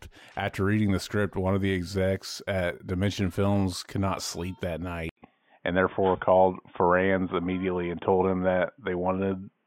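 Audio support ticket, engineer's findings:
Dull, boxy sound from 5.09 s to the end, right after "could not sleep that", with an 80 ms gap at the switch. Nothing above 3.6 kHz, faint new noise floor, level unchanged. Input switched to a poorer device, likely a narrowband mic.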